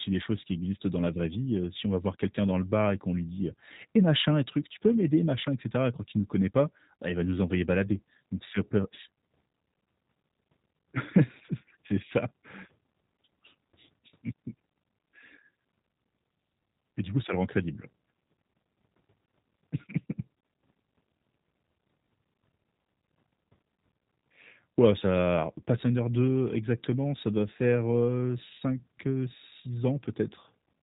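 From start to finish the speech carries G.729 codec damage. Nothing passes above 3.8 kHz. The voice sounds rough and synthetic, which fits an 8 kbit/s rebuild.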